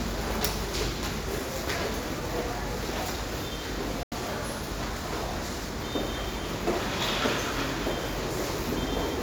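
A digital broadcast dropout cuts into this recording of sounds from 4.03 to 4.16 s. The audio fades out in about 3 ms, leaving a hole of roughly 85 ms of missing material before it returns. This happens when a receiver loses the digital signal or rejects corrupted frames and mutes until valid data resumes. The length of the gap fits about two lost frames. Whatever was transmitted during the gap is gone for good.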